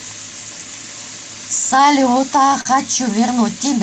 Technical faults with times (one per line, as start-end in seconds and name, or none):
2.61-2.67 short concealed packet loss